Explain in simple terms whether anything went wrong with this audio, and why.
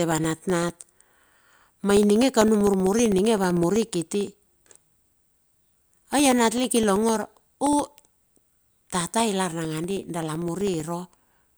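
Yes, the speech has periodic USB or driver dropouts from about 0.05 s to 11.51 s. Every 0.064 s, roughly fifteen times a second, a background task stalls the connection and about a millisecond of sound is replaced by silence. That makes a steady, fast ticking under the speech, heard only while someone is talking. The perfectly even spacing is what sets it apart from network glitches or random clicks, which strike at irregular moments.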